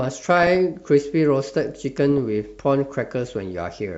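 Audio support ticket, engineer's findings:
Burbling over the speech at 0.37–0.55 s and again at 2.09–2.18 s. DAB burbling: weak reception, residual bit errors (around 0.2 percent) slipping past error correction into MP2 data. Corrupted samples add short noise blips in single sub-bands; corrupted scale factors make sub-bands jump in level for up to a frame.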